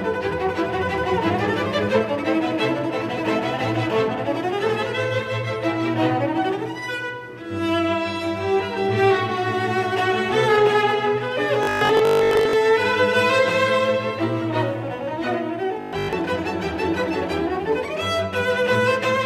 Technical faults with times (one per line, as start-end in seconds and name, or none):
11.63-12.53 robotic sound from repeated short buffers
15.81-16.13 robotic sound from repeated short buffers